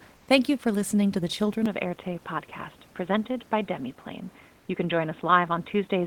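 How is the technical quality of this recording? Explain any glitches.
Two faults affect the recording, against a room noise sitting about 33 dB below the speech.

Comfort noise in place of the background, 0.17 to 0.27 s: for about 100 ms the background turns steady and featureless at the same level, likely from discontinuous transmission with receiver-synthesised fill.

Input switched to a poorer device, from 1.66 s to the end: the sound turns duller, with nothing above 3.8 kHz and new noise roughly 35 dB down, likely a change to a narrower-band microphone.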